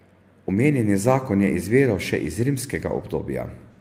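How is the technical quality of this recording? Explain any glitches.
No glitches can be heard anywhere in the recording; the signal stays continuous and stable throughout.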